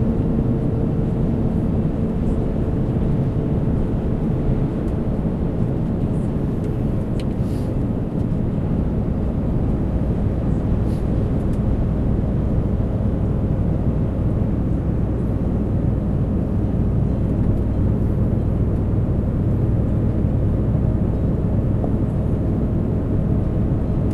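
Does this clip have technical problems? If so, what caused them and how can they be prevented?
Yes, there's a short burst of damaged data in a compressed stream from 21.82 to 21.85 s. Corrupted bytes threw the decoder out of sync, producing a brief blip. Checksummed transfers and verified copies would prevent it.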